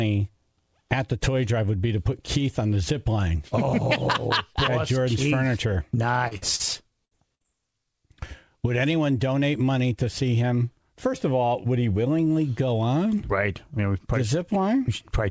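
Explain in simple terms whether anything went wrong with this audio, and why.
Yes, something went wrong, in a cluster between about 6.3 and 7.5 seconds. The sound passed through a call codec that removes everything above 8 kHz.

Short concealed packet loss at 6.28, 6.56 and 7.42 s: a few hundredths of a second went missing and were patched over, leaving a brief smear or wobble rather than an audible gap.

Burst of packet loss at 6.37, 7.05 and 7.35 s: longer runs of about 40 to 60 ms were lost. The patch holds the last sound as a fading buzz or hiss, and the sound then jumps ahead.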